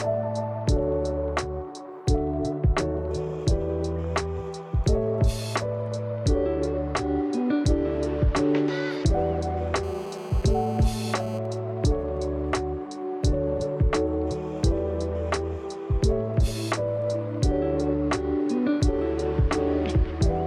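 From 9.83 to 11.39 s there's a GSM phone buzz: a hard, raspy 217 Hz drone about 19 dB below the sound, a nearby handset in a call getting rectified. Right after, 11.45 to 12.51 s, come GSM signalling bursts, faint even ticks with a longer buzz twice a second, a phone in a call while its user stays quiet.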